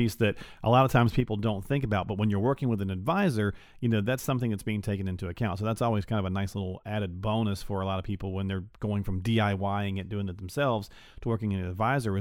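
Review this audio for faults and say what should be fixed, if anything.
At 1.2 s, right after "a lot of times", the speech level falls abruptly by about 6 dB. It stays down until the end of the clip. This is most likely one channel dropping out of a stereo recording. When the two channels are summed to mono, sound shared by both loses half its contribution. Anything present only in the lost channel vanishes entirely. To prevent it, secure the cables and connectors for both channels and monitor each channel's meter during recording.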